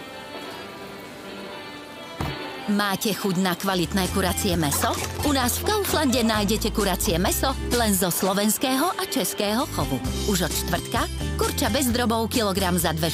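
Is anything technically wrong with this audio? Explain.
Yes, there's one glitch. At 10.35 s there's a block of digital silence: the audio drops to zero for about 0.73 ms, which fits a 32-sample block going unfilled, then snaps back with no fade. The two hard edges sit so close together that it comes across as a single tiny tick.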